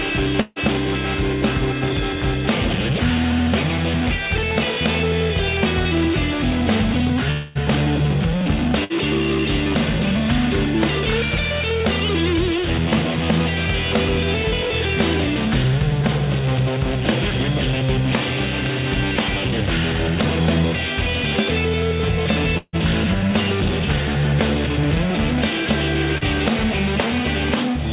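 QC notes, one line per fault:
0.41–0.59 s and 8.84–8.93 s, burst of packet loss: Two gaps of about 150 ms and 60 ms were filled by continuing the last sound and turning it down, with 10 ms of silence at the end of the first. Playback then resumes about 150 ms and 60 ms further on. Both gaps sit within the 50 to 150 ms range, and the first includes a brief silence, which separates these from the longer dropouts and from the quick blended repair at 26.2 s.
7.31–7.58 s, long network dropout: About 240 ms of audio is missing, covered by roughly 240 ms of the last sound continued and fading, with no silence. The likely cause is a stretch where no audio arrived at all. The audio returns without the lost part. The fill is longer than either packet-loss burst, and the jump forward after it is also longer. The signal never settles to a hold or silence, so it stays a decaying continuation throughout.
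22.58–22.76 s, long network dropout: About 150 ms is missing. The fading continuation gives way to about 50 ms of silence before the audio returns further on. The likely cause is audio failing to arrive for that stretch. The fill decays all the way to silence, unlike the 0.41 s burst, which ends in only 10 ms of silence. That full decay is what marks this as a dropout.
26.18–26.24 s, short concealed packet loss: About 30 ms never reached the decoder in time. The receiver extended the preceding sound and blended it back into the real audio, so it comes across as a brief smear or wobble. It has no fade-out, no silence and no audible jump forward, which separates it from the longer gaps. The band stays capped at 4 kHz here as everywhere, consistent with a G.711 A-law call path.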